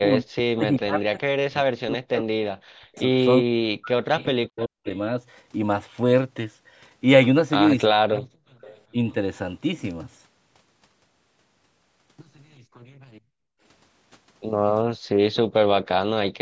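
From the start to 4.86 s the speech keeps dipping hard, falling by something like 40 dB at its worst, with about three seconds of that stretch pulled down or broken into pieces. That's speech suppressed in double talk: the echo canceller was likely unable to tell this talker from loudspeaker echo while both ends spoke, so it ducked everything. The same thing returns from 7.9 to 9.15 s, for under a second in total.

Inside those stretches there's echo leak, a faint copy of the speech trailing by 380 ms, roughly 25 dB down. There's a tiny scrap at 4.19 to 4.25 s and a longer bit from 8.16 to 8.8 s. The far end's canceller likely didn't fully remove what its microphone caught from its loudspeaker, so some of it came back. It shows up again from 15.34 to 16.28 s, a little louder at about 20 dB below the speech.

Between those, the room sound gets gated by the echo canceller. From 12.78 to 13.63 s the background drops by about 32 dB, for most of that span. 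Then there's a short hole from 14.97 to 15.08 s, down about 40 dB. Each time the canceller clamped the microphone while the loudspeaker was playing, then let go, so the ambience drops out and comes straight back. The normal call processing also means nothing reaches above 8 kHz.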